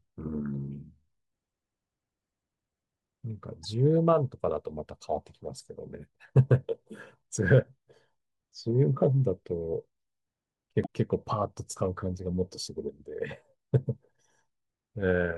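Damaged data in a compressed stream occurs at 3.63–3.65 s and again at 10.81–10.87 s in this speech. Corrupted bytes make the decoder misread those frames and lose sync until it finds a valid header, producing a brief chirp, squawk, click or short hole each time.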